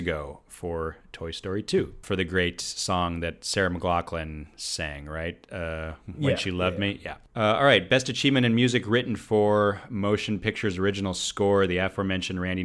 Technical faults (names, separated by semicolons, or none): none